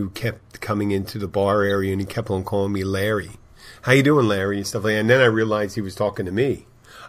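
A corrupt frame decoded at 1.70 to 1.75 s, just after "coming into the bar" and before "and he kept on", produces a brief burst of about 50 ms. The damage fits a couple of compressed speech frames whose bits were flipped. The decoder played them anyway, reading wrong gains and codes, so energy landed at the wrong frequencies. The result is an unnatural sound peaking at roughly -20 dBFS.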